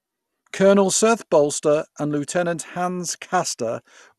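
Speech clip with MP2 compression damage throughout, plainly audible from start to end. Nothing reaches above 12.2 kHz, so the top is dull, and the remaining band carries a gurgling, granular roughness. This is likely MPEG Layer II coding starved of bits, with the upper sub-bands dropped and the rest quantised coarsely, which fits a low rate of around 80 kbps.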